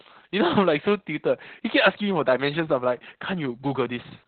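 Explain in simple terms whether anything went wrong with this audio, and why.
The speech was squeezed very hard by Opus voice compression from start to finish. To save data, the coder kept only the lower part of the sound, cutting everything above about 4.4 kHz, and it described the voice in rough strokes rather than in detail. As a result the speech sounds muffled and boxed-in, like an old phone line, with a hoarse, slightly robotic edge and none of the crisp hiss of sounds such as s.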